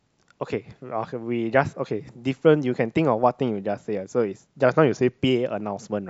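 From 4.65 to 5.19 s, the speech briefly slows by 6.2% and drops about a semitone, then snaps back. This is likely a drift correction step, where clock-matching software changed the playback rate at once to rebalance its buffer.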